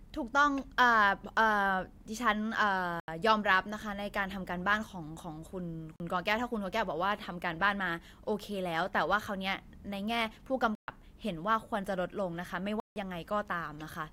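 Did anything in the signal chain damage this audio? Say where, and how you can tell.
Yes. The damage sits at the driver or buffer stage: four blocks of digital silence cut the speech at 3.0–3.08 s (80 ms), 5.96–6.0 s (40 ms), 10.75–10.88 s (about 130 ms) and 12.8–12.96 s (160 ms). Each drops straight to silence and returns with no fade. That pattern fits an output buffer not filled in time. Network loss concealment would instead smooth or repeat sound across the hole.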